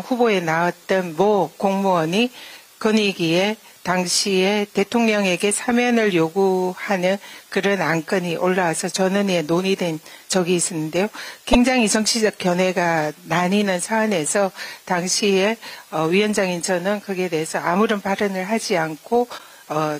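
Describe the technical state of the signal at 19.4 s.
At 19.35 to 19.40 s, damaged data in a compressed stream makes the decoder lose sync. It gives a brief glitch, seen as a broadband smear and a waveform discontinuity.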